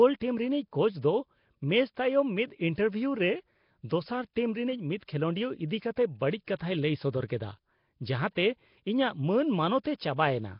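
A speech recording carrying heavy codec damage from start to finish: a rough, hissy halo sits around the voice, with a smeared, underwater quality, and nothing is present above 5.3 kHz. The likely cause is Nellymoser compression, the Flash-era microphone codec, at a rate that fits roughly 22 kbps. It spends a fixed, small bit budget per sample, leaving weak bands empty and filling them with noise, which accounts for the hiss and blur. At 6.59 s, just before "ᱞᱟᱹᱭ ᱥᱚᱫᱚᱨ", there is pre-echo: an 18 ms wash of hiss arrives ahead of a sharp onset, softening it. That happens because quantisation noise sized for the loud attack is spread across the whole coding block, including the quiet moment before it.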